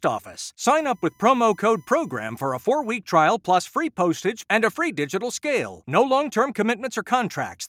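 From 0.78 s to 2.98 s a faint, steady 1 kHz tone sits well beneath the speech. This is USB whine: current drawn in the bus's 1 ms frames leaks in through power or ground. Unlike mains hum at 50 or 60 Hz, its pitch matches the frame rate.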